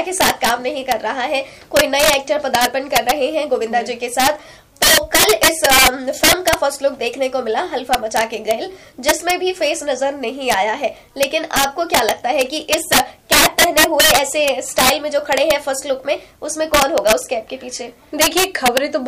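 Integer overflow runs through the whole recording: the signal was pushed roughly 12 dB past full scale, and instead of being limited, the integer arithmetic wrapped, so any sample above the ceiling jumped to the opposite extreme of the range. Only a small share of samples, around 2 percent, crosses that line, but each one produces a violent crack on the loudest moments of the audio, harsher and more abrupt than ordinary clipping.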